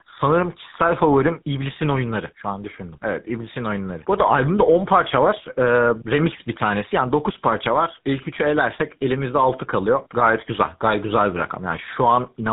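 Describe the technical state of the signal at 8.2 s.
At 8.2 s the speech carries tandem speech coding, present throughout the clip: an AMR-NB stage, then G.711, then a GSM full-rate coder re-encoding already coded speech. It sounds rough, muffled and warbly. A spectrogram shows nothing above 3.8 kHz and blurred harmonics.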